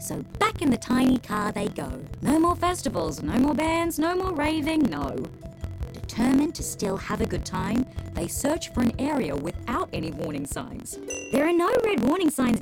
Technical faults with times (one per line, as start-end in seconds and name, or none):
0.00-12.62 block size mismatch (truncated)